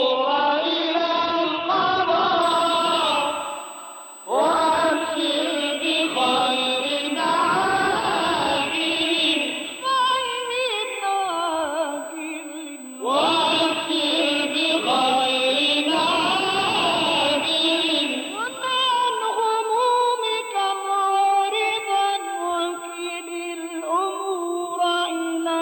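From 2.42 s to the end of the clip, a steady high whine at 8 kHz sits under the sound, around 20 dB below the signal. This is USB whine: current drawn in 125-microsecond microframes on the USB bus leaks into the audio through power or ground, giving a fixed pitch at the 8 kHz frame rate. On a spectrogram it shows as a thin, unbroken horizontal line at 8 kHz starting at 2.42 s.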